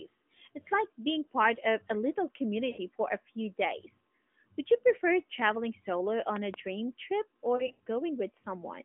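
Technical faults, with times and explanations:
2.70–2.80 s, lost AMR speech frames: right after "of a little", about 80 ms fails, which fits four consecutive 20 ms frames. The decoder repeats the last pitch and vocal-tract settings at falling gain, so the sound stretches and fades. On a spectrogram, harmonics run flat and dim; the waveform envelope sags.
6.36–6.56 s, loud pop: after "you prefer traveling solo", two sharp pops about 15 dB above the speech, which carries on underneath. This is likely a voltage transient from a plug, switch or static discharge. The waveform shows two tall isolated spikes, and the spectrogram shows two thin vertical broadband lines.
7.56–7.81 s, lost AMR speech frames: 140 ms of frames drop out scattered across 240 ms, the longest run 80 ms. Each gap is a brief warble or fade, and the sound returns weak or rough between them. Within the 200 Hz to 3.5 kHz narrowband line, the spectrogram shows several short frozen, fading patches, and the waveform shows repeated envelope dips.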